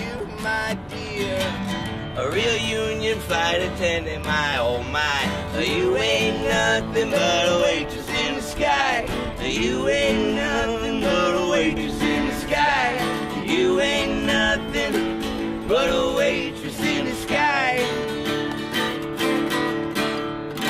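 A doubled audio track runs from 11.77 to 13.43 s: a second full-band copy trails the original by roughly 150 ms at about 10 dB lower, with no decay or room colour, switching on and off abruptly, likely from a slower second capture path or misaligned edit.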